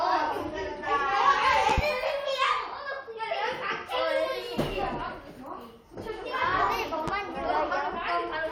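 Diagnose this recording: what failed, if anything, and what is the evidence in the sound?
Loud pops, a quick pair at 1.70–1.81 s and one at 7.08–7.11 s, spike above the sound; likely a voltage transient in the analogue wiring.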